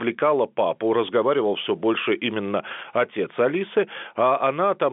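No faults can be heard in this telephone-band speech.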